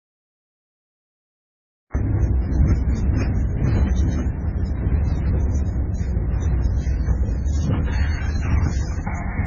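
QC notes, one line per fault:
throughout: transcoding between lossy codecs. Likely a low-rate MP3 re-encoded to AAC-LC, so both codecs' smearing and swirl stack up, with nothing above 7.1 kHz.
0.00–1.95 s: cut-off start. The recording began late, so digital silence gives way abruptly at 1.95 s to sound already in progress, with no natural attack.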